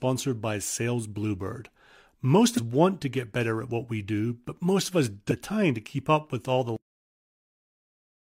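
At 2.54 to 2.59 s, just before "want to get better", the audio lurches forward: compressed frames skipped. Whole decoded blocks never reach the output, so about 200 ms of material vanishes, which points to roughly five frames of about 42.7 ms each. Unlike a dropout, no silence is inserted. Time simply jumps.

The same fault returns at 5.27 to 5.32 s, between "but most of us" and "time to keep up". This time roughly half a second is missing, around ten frames' worth, so the sound leaps further.

At 6.76 s, right after "to keep up with", the clip has a cut-off end. The final buffers were never written, so the sound stops mid-utterance and falls straight into digital silence with no decay tail. That abrupt drop is what separates it from a fade or a natural ending.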